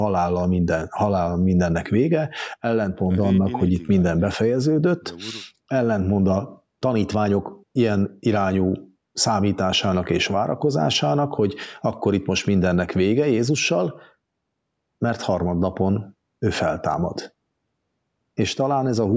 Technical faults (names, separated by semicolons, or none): none